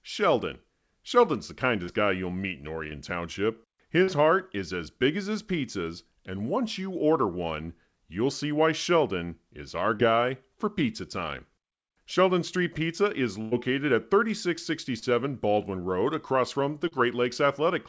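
Short concealed packet loss occurs at 1.84, 2.87, 4.03, 9.95, 15.0 and 16.88 s. Each time, about 40 ms of speech goes missing (20 ms at 15.0 s). The receiver extends the preceding sound, leaving a brief smear or wobble.

A burst of packet loss occurs at 13.41 to 13.53 s. About 100 ms is lost. The last sound is held, fading as it goes, and speech resumes further on.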